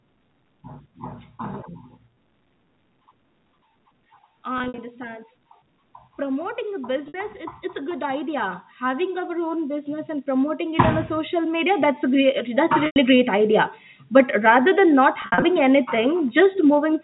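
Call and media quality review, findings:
Packet loss with pitch repetition, 4.58–4.78 s. Speech briefly held and buzzy, then a cross-fade back. About 120 ms lost across 200 ms, longest gap 60 ms. Receiver concealment repeats the last pitch period. Fits 20 ms packets.

Same fault, 7.08–7.14 s. One 60 ms gap. Short buzzy hold on the repeated period.

Same fault, 12.86–12.96 s. 100 ms gap. Repeated period fades toward silence, then speech returns with a cross-fade.

Same fault, 15.22–15.42 s. About 140 ms lost over 200 ms, longest gap 60 ms. Several clustered buzzy holds.

Automatic gain rising, 6.18–13.1 s. Speech and background swell together, about 15 dB overall. The AGC stage judged the input too quiet. It raised gain slowly over roughly seven seconds. The slow rise reads as a gradual level climb, not a step. Call microphone processing and G.711 A-law telephone coding in the same path.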